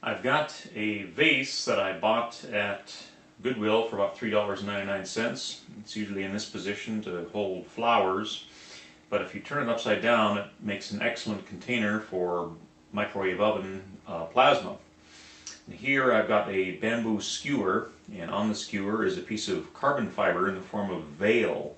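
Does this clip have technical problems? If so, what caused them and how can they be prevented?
No, nothing in this clip stood out as a technical problem on listening.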